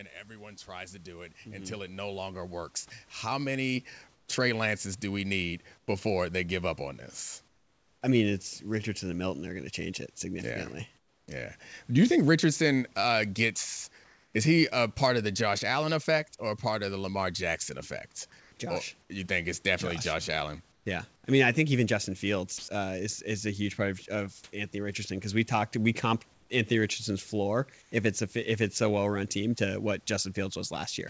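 From 0.27 s to 11.6 s the automatic gain control judged the input too quiet and kept turning itself up, by about 18 dB in all. Because the whole signal is amplified, the speech and the room noise behind it swell together, so the first eleven seconds grow steadily louder and the background grows louder along with the voice.

Between 4.14 s and 8.02 s the sender's voice detector likely treated the pauses as silence and stopped transmitting, leaving the receiver to fill about 780 ms with synthetic comfort noise. The natural room background is replaced by a smooth, featureless hiss. The same happens from 10.98 s to 11.28 s, where about 300 ms of background becomes steady noise roughly 9 dB quieter, against a background about 39 dB below the loudest speech. From 14.04 s to 14.34 s, just after "uh gets", another 300 ms is swapped, but the level stays within about 1 dB, so only the change in texture gives it away. 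Across 18.40 s to 27.92 s, ending just before "if it's a if", about 860 ms of background in total is replaced in the same way.

From 22.58 s to 22.68 s the voice detector likely mistook the sound there for background and stopped sending. About 70 ms of real sound is lost there, and in its place the listener hears a brief patch of flat comfort noise before the sound returns.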